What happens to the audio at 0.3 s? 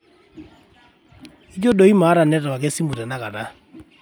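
Nothing goes wrong at 0.3 s; the speech there is intact, with no dropout, click or distortion at that moment.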